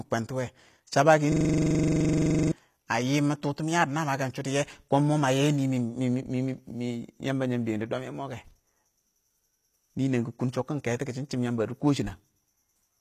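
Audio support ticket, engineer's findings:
System hang loop, 1.32 to 2.52 s: one 42.67 ms fragment repeats 28 times at 23.4 Hz, fitting a 2048-sample ring buffer replayed while the driver froze. About a second of audio lost. Waveform shows identical tiled blocks; spectrogram shows vertical stripes.

HE-AAC compression, whole clip: plainly audible codec damage, gritty or metallic s sounds. Likely a low-bitrate HE-AAC encode, consistent with around 24 kbps; treble is rebuilt by band replication with mismatched harmonics. Spectrogram shows a hard ceiling at 14.9 kHz.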